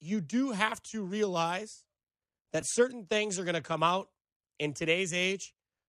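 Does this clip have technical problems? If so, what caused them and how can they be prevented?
Yes. At about 2.61 s there are lost LE Audio frames. About 15 ms of Bluetooth audio went missing, which fits two 7.5 ms frames. The LC3 decoder filled the gap by reusing the last spectrum with random signs. This gives a brief noisy smear. To prevent it, keep the Bluetooth link strong and free of interference.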